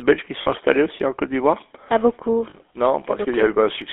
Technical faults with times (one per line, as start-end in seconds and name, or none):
0.00-3.92 GSM full-rate codec
0.42-0.48 lost GSM frames
2.50-2.55 lost GSM frames